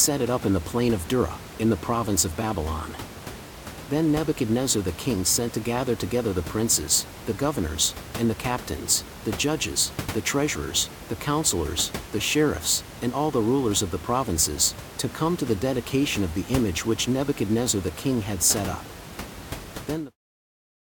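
Nothing's technically amiss in this speech recording; you'll just hear a bit of room noise sitting about 14 dB under the talking, and the level eases away in a smooth fade-out from around 19.5 s to 20.17 s, both simply part of how it was recorded and edited.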